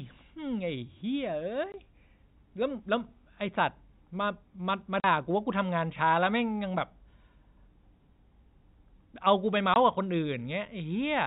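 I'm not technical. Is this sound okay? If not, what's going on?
No. Packet loss filled with silence at 1.72–1.74 s, 5.00–5.04 s and 9.74–9.76 s: bits of the speech never arrived, so brief gaps of silence with hard edges replace them.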